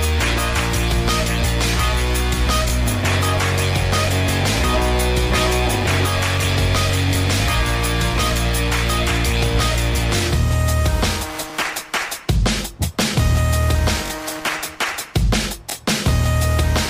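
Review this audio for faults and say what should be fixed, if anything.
Three brief stutters occur at 7.10–7.13 s, 11.50–11.52 s and 14.06–14.10 s, with the last one repeating twice. This is a repeated buffer: fresh audio arrived late, so the device replayed its last 21 ms block, which fits a 1024-sample buffer. Each repeat leaves a hard join. Prevent it by giving the playback path more buffering headroom or a higher-priority audio thread so each block is ready in time.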